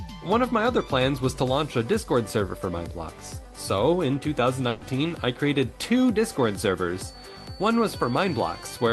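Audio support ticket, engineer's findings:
Burst of packet loss in the jitter buffer / network leg, 4.69–4.83 s: about 120 ms of consecutive audio never played out. Concealment stretches the last sound into a fading buzz or hiss, then playback resumes with that 120 ms missing. Band limit near 12 kHz, consistent with Opus around 32 kbps.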